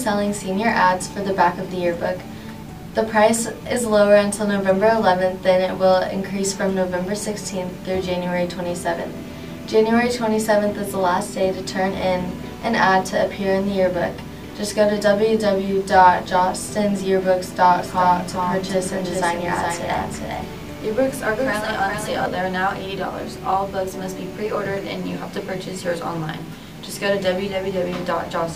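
From 17.8 s to 22.26 s a doubled audio track appears: a full-band copy trails the original by around 0.4 s, somewhat quieter, likely from a second, slower capture path. Unlike an echo, it never decays or repeats, and it starts and stops abruptly.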